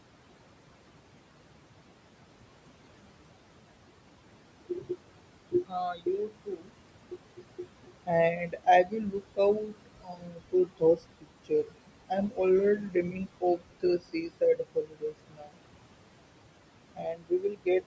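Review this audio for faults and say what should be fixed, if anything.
Noise suppressor artifacts run through the whole clip. The suppressor pulls the room noise, which sits about 12 dB below the speech, down by about 21 dB wherever it judges only noise is present. The background therefore drops away between phrases and returns underneath them. This differs from ordinary gating because the noise is treated band by band and not all at once, which is why the residue sinks and rises band by band rather than simply switching off. To prevent it, use gentler suppression or a lower noise-reduction depth so the floor is not pumped so hard.

Speech cut by the noise suppressor happens at 4.69–11.73 s (about 3 s affected in total, drops near 22 dB), 12.08–12.39 s (a brief moment, about 19 dB), 12.79–15.64 s (around one and a half seconds, about 23 dB) and 16.95–17.86 s (under a second, about 22 dB). 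Soft consonants and endings are treated as noise and vanish. Unlike a dropout, the audio keeps running and only the quiet speech parts fade. To prevent it, raise the suppressor's speech-protection threshold or reduce its aggressiveness. The band-limit at 8 kHz from the call's microphone processing is expected.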